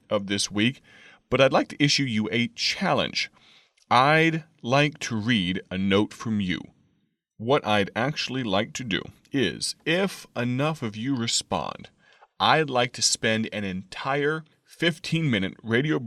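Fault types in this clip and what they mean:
No audible faults detected.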